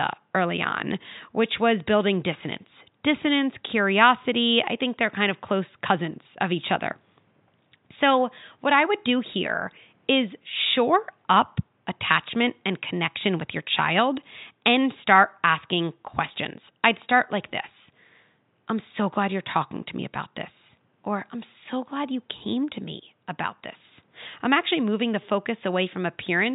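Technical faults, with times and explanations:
No technical faults are present; the only background is the room's own ambient noise, about 45 dB below the speech, which belongs to the recording rather than to the system.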